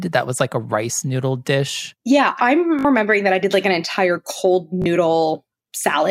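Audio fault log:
2.79–2.85 s and 4.82–4.86 s, Bluetooth stutter. Packets arrived late or not at all. The receiver replayed its last short slice, heard as a quick buzzing stutter. The sound then jumps ahead. About 56 ms and 37 ms go missing, which fits three and two lost packets.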